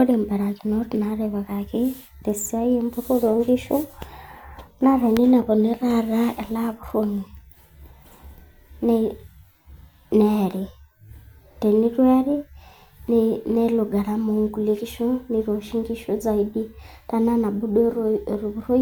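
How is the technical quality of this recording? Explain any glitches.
Nothing in the speech stood out as a technical problem when I listened to it.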